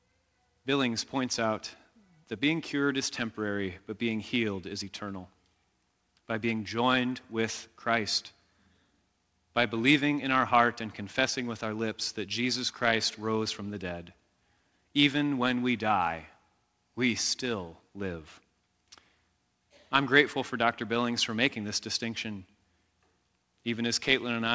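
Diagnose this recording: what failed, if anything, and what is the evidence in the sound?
Nothing has failed in this speech recording: it arrives over a working call path whose band limit at 8 kHz, with no content above it, fits a wideband G.722 link operating as intended.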